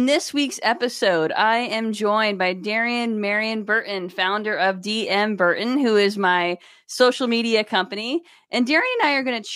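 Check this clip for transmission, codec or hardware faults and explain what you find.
No faults turn up in this clip.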